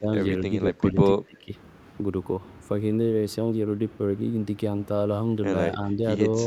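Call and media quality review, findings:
Speech suppressed in double talk: level dips at 0.00–0.09, 0.50–0.99, 1.21–1.53 and 5.72–6.03 s, deepest around 20 dB near 1.2–1.5 s, mildest at the end. Likely the echo canceller ducking the near talker while the far side speaks.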